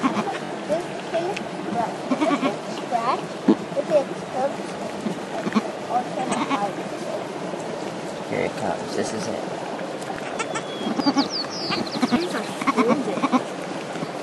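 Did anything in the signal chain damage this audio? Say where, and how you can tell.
Yes. Early on, at 0.45 to 0.49 s, there is a brief stutter: a single compressed frame of 21.3 ms is played two extra times, adding about 43 ms. This is repeated frames at the codec or storage stage, where the same encoded block was written or delivered more than once. What separates it from a buffer fault is that the sound goes back and replays rather than jumping ahead, and the clip grows longer instead of losing material.

Later there are six points where the sound jumps forward with no gap of silence, at 3.88, 8.18, 9.08, 10.16, 11.00 and 12.16 s. Each skips about 20 ms, except the one at 10.16 s, which loses something nearer 70 ms. This is likely a dropped buffer (overrun) at the driver or buffer stage: samples were overwritten before being read, and the two sides were joined directly. Unlike the stutter, nothing repeats, and the audio simply skips ahead.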